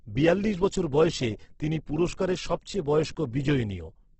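Throughout the speech, nothing survives above 8.2 kHz, and what remains is heavily rough and grainy, with noise filling the bands instead of the swirling holes MP3 leaves. This is Opus compression, likely in CELT mode at a rate fitting about 12 kbps.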